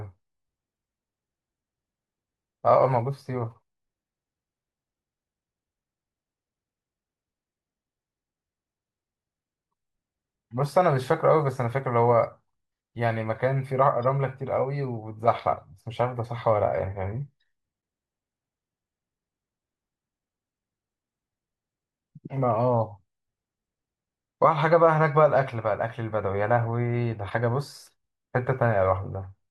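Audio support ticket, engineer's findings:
Short glitch bursts in speech, four events: 9.68–9.71 s, 14.02–14.04 s, 17.78–17.80 s, 27.26–27.32 s. First three about 26 ms each, last about 56 ms. Cause: damaged data in the compressed stream. Corrupt bytes reach the decoder, which misreads frames, loses sync and hunts for the next valid frame header. The brief lengths point to corruption confined to short stretches of the stream.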